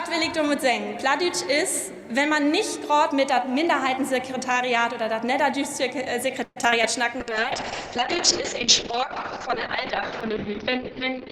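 Repeated packet loss (robotic sound) starts the trouble: between 6.43 and 6.85 s, packets kept going missing or arriving late, and the receiver covered each hole by extending the last sound it had. Four gaps land in close succession, the longest about 126 ms, and concealment fills roughly 38 percent of that stretch. Even so, some 60 ms of material is simply gone, so the audio turns choppy, with fragments dropping out. Right after, from 7.11 to 7.71 s, a jitter buffer slow-down follows. The receiver, short of a safety margin, stretched the signal by repeating small slices, adding about 36 ms. Playback runs at 95 percent speed with the pitch unchanged, so sounds across that half-second are slightly drawn out. Overlapping this, a call bitrate drop begins at 7.20 s and lasts to the end of the clip. The bandwidth estimate fell, and the encoder was forced far down, which fits a fall from around 64 kbps to roughly 6 kbps. 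The audio band narrows from 20 kHz to 6 kHz, so everything after 7.20 s sounds muffled, and the coarse coding gives it a rough, watery texture that never recovers.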